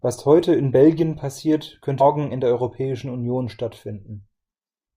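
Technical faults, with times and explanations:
0.43 s and 2.00 s, compressed frames skipped. Whole compressed frames never reach the output, so the audio jumps ahead. At 0.43 s only a few frames vanish. At 2.00 s, just before "in der", about a fifth of a second goes missing.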